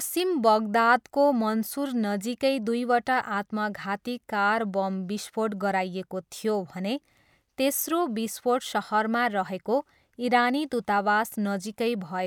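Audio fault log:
No dropouts, distortion, noise bursts, timing errors or level problems can be heard anywhere in this speech recording.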